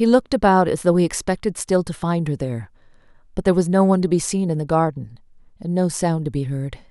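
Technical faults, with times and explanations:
Nothing in this speech recording stood out as a technical problem on listening.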